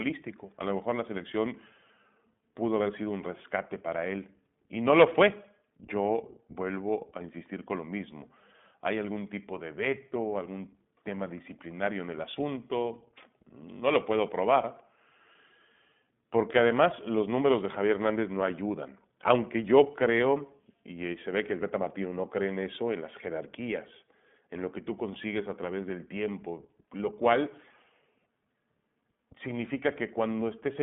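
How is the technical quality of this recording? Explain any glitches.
Quality's held back by one issue across the whole speech recording. iLBC codec, start to finish: narrowband coding of each 20 ms frame independently, plainly audible coding damage, and nothing above 3.7 kHz, which fits iLBC's 15.2 kbps mode.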